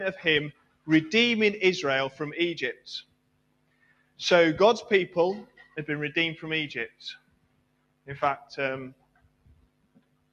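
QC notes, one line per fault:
Throughout: noise suppressor applied to music or sounds. A speech-tuned suppressor stays active and keeps reading sustained material as noise. Its gain swings by roughly 15 dB, so the sound pumps and thins. Onsets pass, but held parts and tails sag.
0.52–0.88 s, 2.74–4.19 s, 5.45–5.77 s, 7.17–8.08 s, 8.91–10.33 s: sound cut by the noise suppressor. Steady or decaying sound is pulled down hard, by about 18 dB at its deepest, and about 14 dB at 5.45 s. The level sinks and tails end early.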